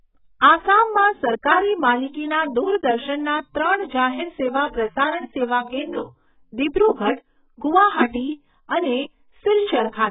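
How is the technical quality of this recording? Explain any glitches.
Quality is poor throughout. Heavy AAC compression likely caused it: the speech sounds dull and smeared, with nothing above 3.8 kHz; a spectrogram shows a flat ceiling.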